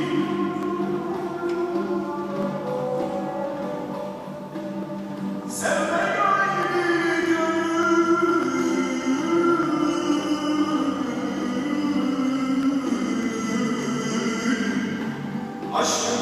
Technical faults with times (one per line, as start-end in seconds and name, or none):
0.63-15.63 clock drift buffer slips